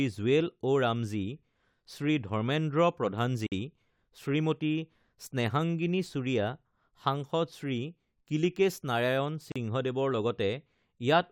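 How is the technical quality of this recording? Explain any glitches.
The speech is interrupted twice by brief dropouts. Short silences open at 3.47 to 3.52 s (about 53 ms) and 9.52 to 9.56 s (about 37 ms), six seconds apart, with smeared edges. This is a gap at a join of encoded pieces: separately encoded segments were spliced without trimming encoder delay and padding.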